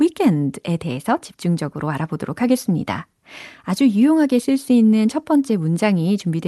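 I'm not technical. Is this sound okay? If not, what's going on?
Yes, no faults heard.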